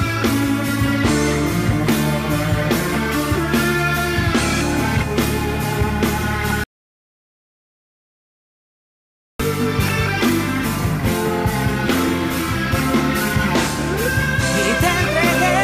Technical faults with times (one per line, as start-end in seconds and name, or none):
6.64-9.39 audio dropout to silence